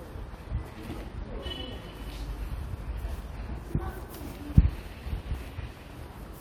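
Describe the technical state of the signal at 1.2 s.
At 1.2 s the signal is intact, with no dropout, clipping, glitch or other technical fault present.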